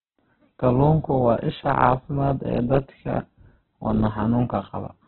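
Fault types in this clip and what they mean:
Opus compression: the speech sounds grainy, noisy and band-limited, with nothing above 4.1 kHz, likely from heavy Opus music-mode coding at about 8 kbps.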